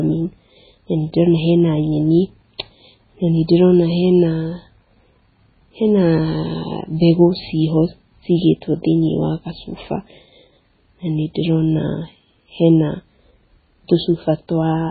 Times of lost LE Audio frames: none

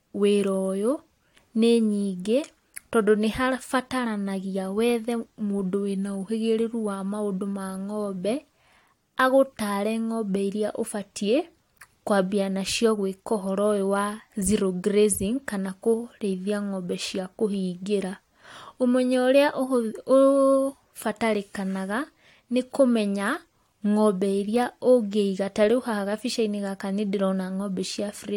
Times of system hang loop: none

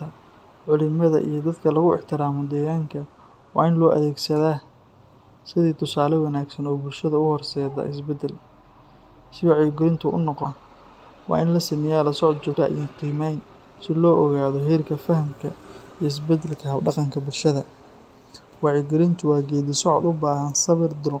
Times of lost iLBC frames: none

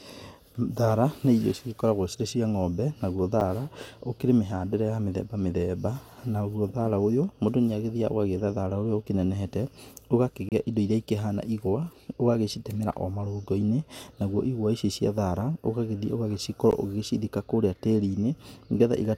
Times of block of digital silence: 3.40, 10.49-10.52, 16.71

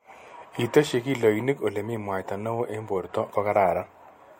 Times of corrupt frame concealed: none

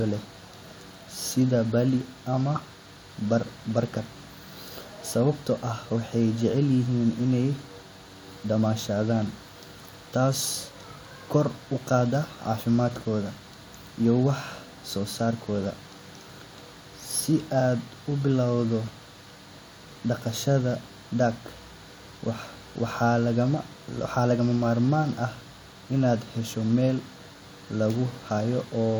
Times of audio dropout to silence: none

